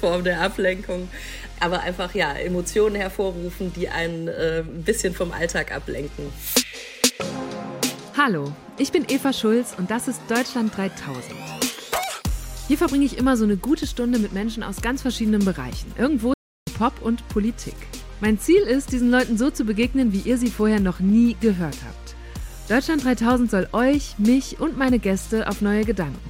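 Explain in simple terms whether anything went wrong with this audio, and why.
Something did go wrong: a playback stall at 16.34 to 16.67 seconds, where the sound goes silent for about a third of a second and then continues. The player likely ran short of data or was briefly held up. Unlike a tiny dropout or click, this gap is long enough to notice as a pause.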